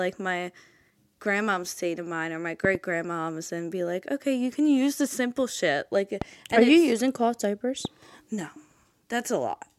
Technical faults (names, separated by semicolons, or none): loud pop